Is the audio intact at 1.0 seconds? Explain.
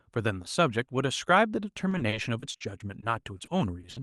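Yes, the speech at 1.0 seconds is intact, carried through the WebRTC call path with its ordinary Opus coding and nothing breaking into it at that moment.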